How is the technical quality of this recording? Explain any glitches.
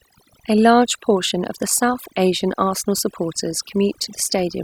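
The speech carries overdone noise removal from start to finish. Denoising set too aggressively mutes bands near the noise estimate, leaving near-silent gaps with twinkling specks.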